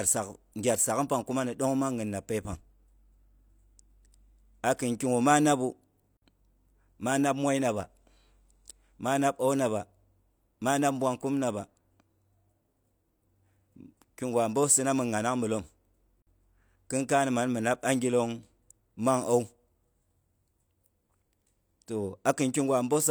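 Short, hard-edged holes of silence break the speech at 6.17 to 6.22 s and 16.22 to 16.27 s: a gap between chunks, 50 ms of silence inserted where 10 s chunks join.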